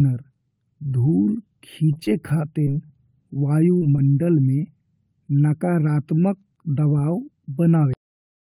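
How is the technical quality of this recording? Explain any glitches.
The recording has four glitches: a choppy patch early on, two quick dropouts just after it, and an ending that gets chopped off.

From 1.93 to 2.92 s there's repeated packet loss, giving a robotic sound. Five separate gaps hit that second, the longest about 31 ms. Each time, the receiver papers over the hole by extending the previous sound, so the speech comes out choppy and a bit mechanical, with roughly a tenth of that stretch synthesized.

Then there are two short concealed packet losses, at 3.78 to 3.83 s and 3.95 to 3.99 s, about 40 ms and 20 ms of missing audio. The decoder fills each gap by continuing what came before and blending back in, which you hear as a brief smear or wobble in the speech.

Finally there's a cut-off end at 7.94 s. The last chunk of audio never got written out, so the speech stops mid-sound and falls straight into digital silence for the remaining half second or so, with no natural decay at all.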